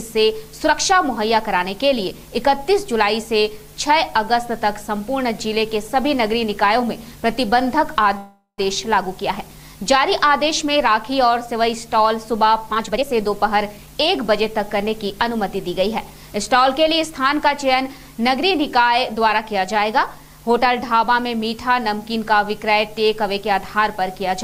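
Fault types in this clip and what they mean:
Call audio freeze: Packets were likely delayed until the jitter buffer emptied, so from 8.17 s the last sound is stretched into a fading buzz or hiss, then 0.1 s silence, resuming at 8.6 s with nothing lost.
Jitter buffer speed-up: The receiver trimmed short pitch-period slices to cut excess buffered delay, so from 12.71 to 15.37 s the audio runs at 115% speed, same pitch, sounding hurried, shedding about 0.4 s.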